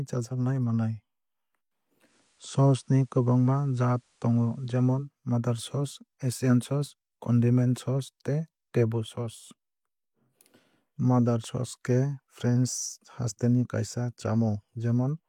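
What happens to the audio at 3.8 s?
Digital radio blending to analogue is under way at 3.8 s, inside a stretch running from 1.99 s to 5.10 s. The receiver lost its digital stream and cross-faded over about 167 ms to the station's FM broadcast, then later returned. During the FM portion the level shifts by about 1 dB, and a faint hiss appears, roughly 40 dB below the speech.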